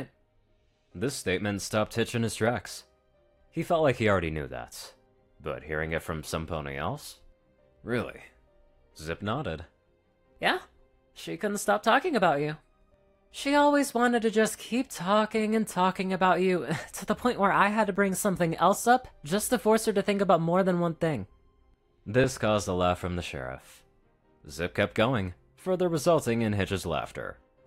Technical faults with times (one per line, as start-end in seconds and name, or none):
17.96 dropped buffer (overrun)
22.24 dropped buffer (overrun)